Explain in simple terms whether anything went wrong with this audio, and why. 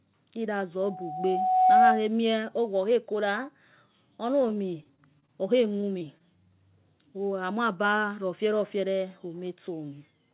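Yes. From 0.82 to 2.09 s there is loudspeaker feedback squeal. The microphone picked up its own loudspeaker, and a steady tone near 742 Hz kept re-amplifying itself. It swelled over about a second into a shrill whistle louder than the speech.

Later, from 4.42 to 5.30 s and again from 5.70 to 6.22 s, the speech turns choppy and robotic. This is repeated packet loss: pieces of audio, each around 20 ms or shorter, went missing in quick succession, and each hole was patched by stretching the sound just before it.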